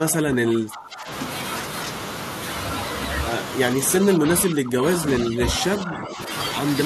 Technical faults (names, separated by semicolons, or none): speech suppressed in double talk